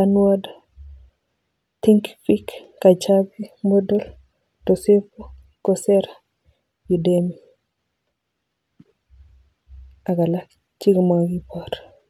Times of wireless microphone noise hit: none

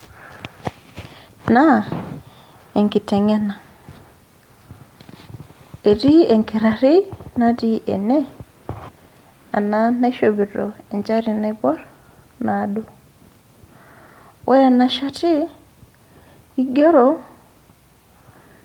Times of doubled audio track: none

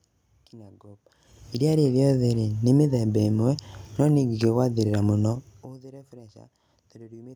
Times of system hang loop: none

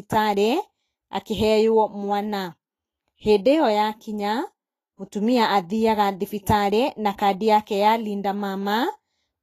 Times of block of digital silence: none

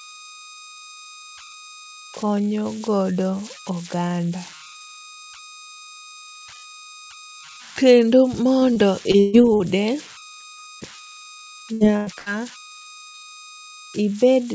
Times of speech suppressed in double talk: none

